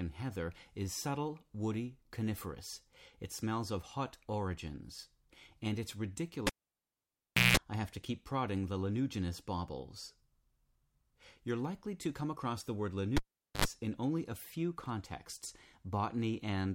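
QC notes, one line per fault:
6.47–7.57 s, cable pulled and plugged in: a pop, then about 1.05 s of near silence, then 0.18 s of 60 Hz mains buzz as only the plug tip makes contact, then a second pop as the sound returns. The waveform shows two sharp spikes around a flat gap, with a dense periodic band before the second spike; the spectrogram shows two broadband vertical lines and a 60 Hz harmonic comb between them.
13.17–13.65 s, cable pulled and plugged in: the same sequence, shorter, with 0.43 s of dropout and 0.08 s of 50 Hz buzz, which appears as tightly spaced harmonic lines starting at 50 Hz just before the reconnection spike.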